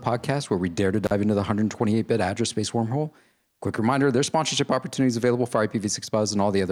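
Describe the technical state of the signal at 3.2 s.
At 3.2 s the speech signal is intact, with no technical fault present at that moment.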